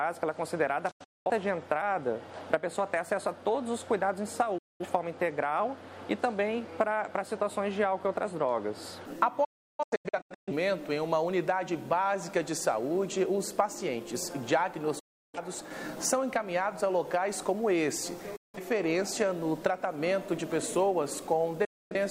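At 0.91–1.30 s, 4.58–4.85 s, 9.44–10.52 s, 14.99–15.39 s, 18.36–18.59 s and 21.65–21.95 s, the sound fades to silence within about 8 ms and returns: a digital broadcast dropout, the receiver muting on lost or corrupt frames. The first and third break into several holes; the third loses 768 ms across 1.02 s. Gap lengths step in multiples that fit roughly 43 ms frames. Waveform and spectrogram show flat, fully blank blocks with short ramped edges.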